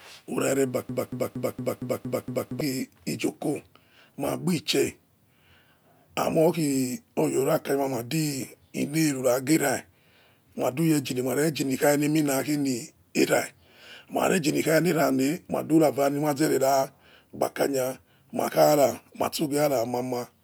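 From 0.89 to 2.61 s the speech sticks in a broken-record loop: a 231 ms fragment repeats exactly seven times, likely from a stalled player or stream, before resuming at "ijoko magbi chair". A spectrogram shows identical blocks tiled back to back.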